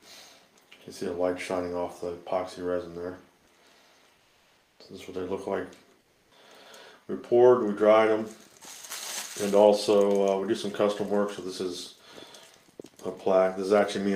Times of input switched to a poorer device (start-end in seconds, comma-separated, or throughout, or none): none